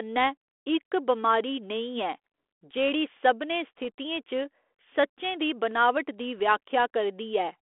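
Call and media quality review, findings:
Bit errors on an ADPCM link: short pop at 3.84 s, rough burst 6.38–6.40 s right after "दी बनावट दी". Sparse flipped bits throw off the decoder's step size and predictor, so each error rings briefly with a level wobble. Carried over the 32 kbit/s G.726 path.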